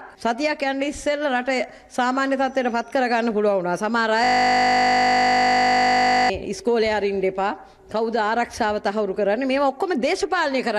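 System hang loop from 4.24 to 6.30 s: the system froze while the hardware kept replaying one 20 ms buffer, producing a steady 50 Hz buzz.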